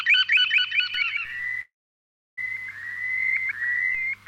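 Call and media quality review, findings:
Doubled audio track, 0.94–3.95 s: a full-band copy trails roughly 150 ms behind at about 5 dB lower, clean with no room tail, starting and stopping abruptly. Likely a second, slower capture path mixed in alongside the direct one.

Call audio freeze, 1.61–2.39 s: sound stalls, a brief fading continuation, then about 660 ms of silence, then resumes where it stopped with nothing lost and playback 760 ms later. Likely delayed packets draining the jitter buffer.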